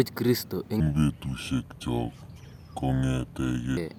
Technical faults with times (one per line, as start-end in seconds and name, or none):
0.80-3.77 section at the wrong speed